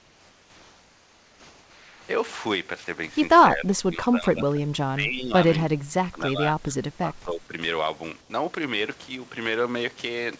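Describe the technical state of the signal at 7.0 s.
An echo canceller likely mistook overlapping talk for echo, causing speech suppressed in double talk from 6.6 to 7.52 s; the speech dips about 20 dB.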